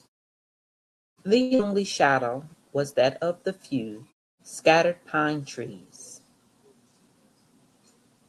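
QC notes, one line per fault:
1.41–1.53 s, short stall from a late packet: a packet arrived late and the jitter buffer ran dry, so the last sound is held for about 94 ms with a slight buzz or dip, then resumes exactly where it stopped. Nothing is lost, unlike true packet loss, and the delay grows by 94 ms.
1.55–1.61 s, short concealed packet loss: about 80 ms of audio never arrived. The receiver filled only about 41 ms by extending the last sound before blending back, so this is a brief smear with a small skip. Unlike the stall, material is actually missing, and the delay shrinks by roughly 40 ms.
1.67–2.31 s, jitter buffer slow-down: to rebuild its reserve, the receiver repeated single pitch periods and bits of pauses, adding 51 ms over this stretch. Playback runs at 93% speed at unchanged pitch, with drawn-out sounds, spread out rather than held in one spot as in a stall.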